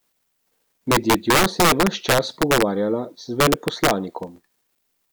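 Violent, sharp cracks burst out of the loud parts of the speech from 0.92 to 2.62 s and again from 3.40 to 3.91 s. This is integer overflow: the signal was pushed about 6 dB and then about 4 dB past the integer limit, and instead of being held at the ceiling, each peak wrapped around to the opposite sign.

From 4.23 to 4.79 s a gritty burst of crackle tears through the sound, made of tiny hard-edged dropouts to silence. This is processor overload crackle. The processing missed many deadlines in a row, which fits a run of roughly twenty buffers of around 3 ms each going unfilled.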